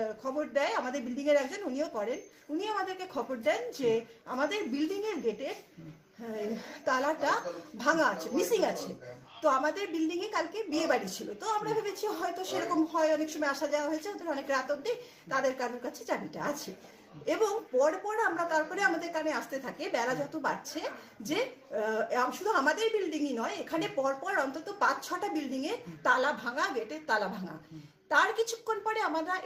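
Nothing here trips the ear at all, just the recording rolling along from the first moment to the last with no faults to point to.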